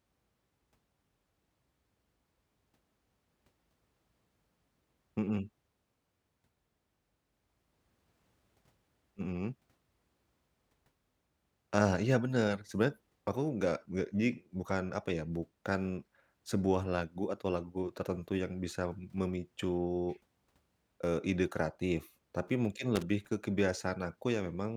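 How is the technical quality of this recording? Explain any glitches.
One glitch stands out, near the end. From 22.95 to 23.03 s there is a loose connector crackle. A worn or dirty contact in the cable path is making and breaking rapidly. That chops the speech signal. It sounds like a short, irregular scratchy burst, about 70 ms long.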